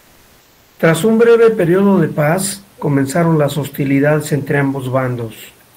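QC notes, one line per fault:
0.00–0.79 s, comfort noise in place of the background: for the first 0.79 s, before the talker comes in, the real room noise is swapped for a smooth, detail-free hiss about 3 dB quieter than the genuine background that follows. That's likely discontinuous transmission, where the sender goes quiet during silence and the receiver makes up shaped noise, consistent with something like Opus DTX. The real room noise, sitting about 36 dB under the speech, shows up once audio flows.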